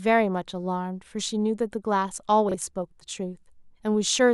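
At 2.49 s a brief garbled flutter cuts across the speech, lasting until about 2.54 s. This is frames out of order: two neighbouring blocks of audio were decoded in swapped order, so the later slice plays before the earlier one. The 56 ms span fits two single frames of about 26 ms each trading places. The three joins create the discontinuities, and no time is lost.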